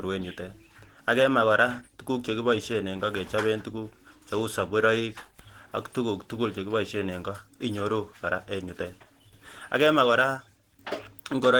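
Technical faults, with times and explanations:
Throughout, Opus compression: muffled, hoarse, grainy speech, likely Opus hybrid mode at roughly 16 kbps; the spectrogram shows noise-filled, blurred bands reaching 20.2 kHz.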